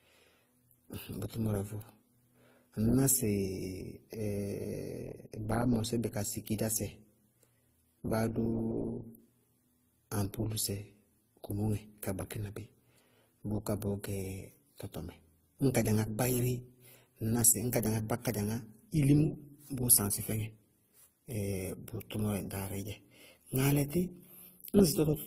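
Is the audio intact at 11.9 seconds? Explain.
No, not really. At 11.9 seconds, as across the whole speech clip, you're hearing transcoding between lossy codecs, likely an AAC-LC encode followed by Opus. Nothing survives above about 15.8 kHz, and the later encoder has spent its limited bits re-coding the first codec's artefacts while adding its own. The two sets of artefacts sit on top of each other, which fits low bitrates of around 32 and 24 kbit/s.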